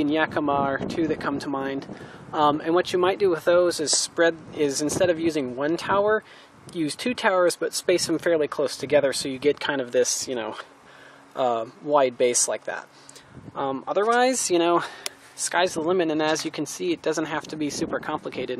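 No technical faults can be heard anywhere in this recording.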